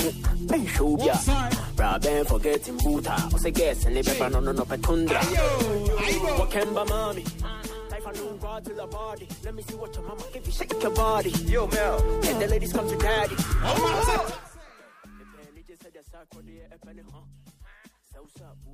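From 10.36 to 10.73 s there's zipper noise: the level comes up by around 10 dB, but in 1 dB jumps rather than a smooth ramp, around twenty steps a second, so you get a fine ticking riding on the sound. It happens again from 14.16 to 14.54 s on the way down, this time in coarser 3 dB steps over a drop of something like 25 dB.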